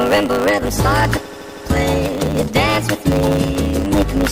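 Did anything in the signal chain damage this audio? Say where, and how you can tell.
Yes. A steady 100 Hz buzz runs under the whole clip, and the sound plays about 1.09 times fast at roughly normal pitch. This is a block size mismatch (truncated) in the driver or buffer stage. One stage writes longer blocks than the next reads, so the tail of each block is dropped and the buzz follows the block rate.

From 1.25 to 1.65 s the sound stutters, looping a short stretch about 80 ms long five extra times and adding about 400 ms. These are repeated frames at the codec, storage or network stage, where the same compressed frames were written or sent more than once and decoded again.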